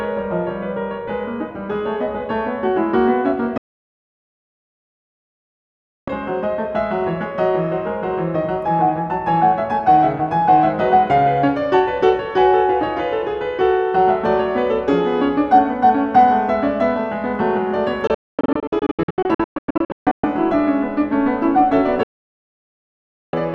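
It's a music clip with three digital broadcast dropouts, where the receiver lost good frames and muted until clean data returned. The music cuts out almost instantly, with a fade of only about 3 ms, from 3.58 to 6.08 s, and again from 22.03 to 23.34 s. Between 18.07 and 20.24 s it breaks into several short holes instead, the longest about 240 ms. Whatever was playing during those gaps is simply gone.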